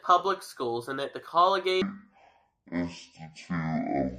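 Playback of the later portion likely ran against the wrong clock, so from 1.82 s to the end of the clip at 4.19 s the speech is a section at the wrong speed, at 0.536 times its recorded rate. Because speed and pitch fall together, the voice drops by roughly ten semitones and turns deep and dragging, with syllables stretched to nearly twice their length. The shift is abrupt, and the change in register stands out against the first part.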